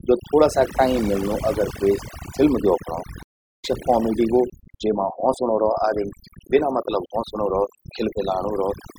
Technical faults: overdone noise removal; stream reconnect

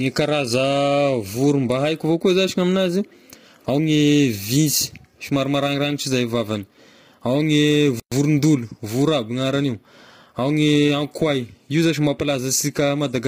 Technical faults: low-delay AAC compression; playback stall

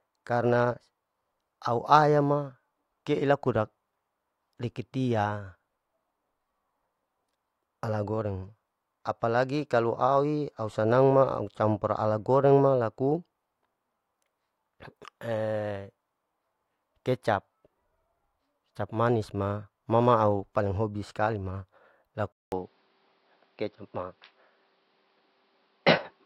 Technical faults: input switched to a poorer device

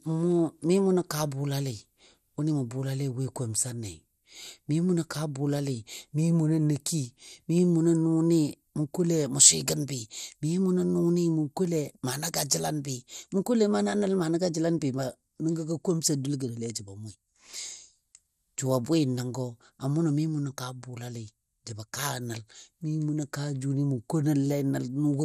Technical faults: MP2 compression

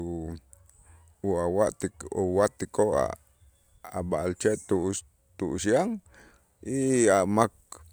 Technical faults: none

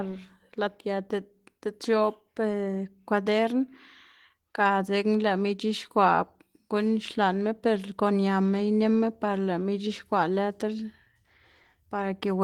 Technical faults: none

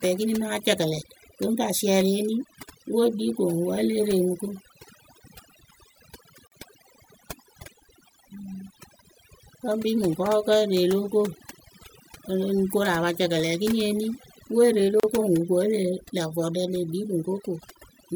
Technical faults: overdone noise removal; gap at a join of encoded pieces

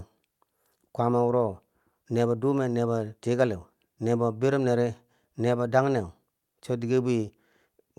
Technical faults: none

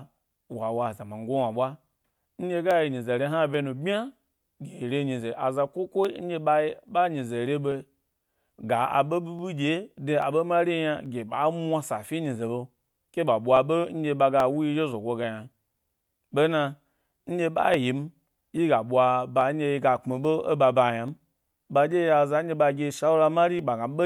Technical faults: clock drift buffer slips

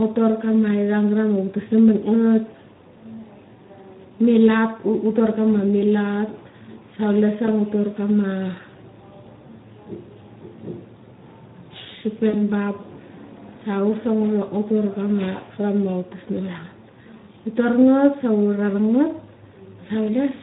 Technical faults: Speex codec; VoIP packet loss concealed by the speech codec

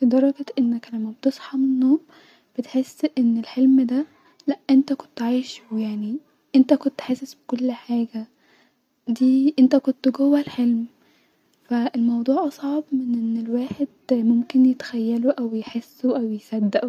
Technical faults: none

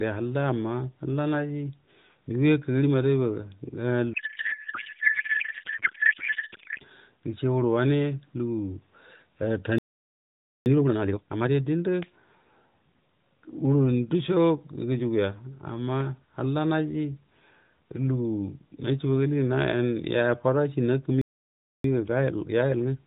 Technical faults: codec payload misread; playback stall; time-compressed catch-up

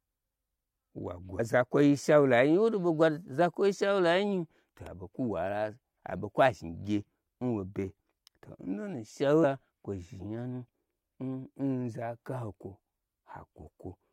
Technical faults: damaged data in a compressed stream

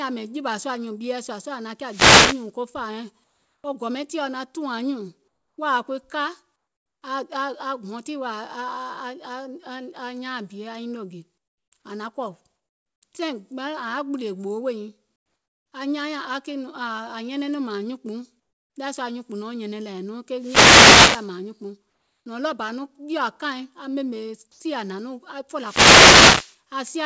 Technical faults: wireless microphone noise hit; comfort noise in place of the background

